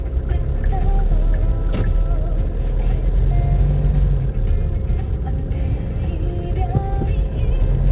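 No technical faults are audible.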